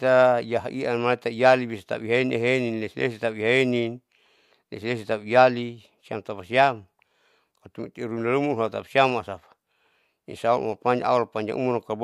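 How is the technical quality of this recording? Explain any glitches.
No glitches or technical faults can be heard here.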